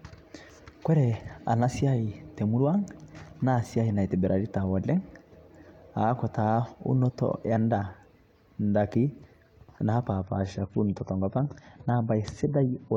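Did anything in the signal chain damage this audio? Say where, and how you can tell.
Yes. An adaptive stream at a lower bitrate appears from 10.22 s to the end. Treble abruptly vanishes above 11.4 kHz without a gap, which fits a network-driven codec switch to about 32 kbit/s AAC.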